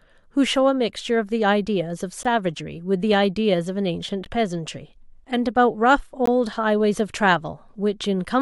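Brief hard-edged silent holes of about 15 to 17 ms cut the speech at 2.23, 4.25 and 6.26 s, roughly every 2 s. These are gaps between stream segments, where mismatched timestamps leave space the player fills with silence.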